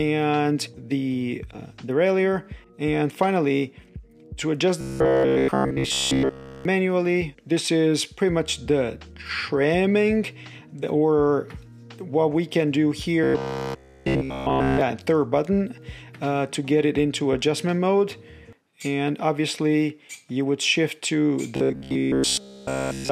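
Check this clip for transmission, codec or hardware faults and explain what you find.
One fault recurs three times. Robotic sound from repeated short buffers at 4.81–6.65 s, 13.24–14.81 s and 21.56–23.11 s: new audio likely arrives too seldom, so a 15 ms chunk is replayed throughout, giving a rigid, metallic 66.7 Hz buzz.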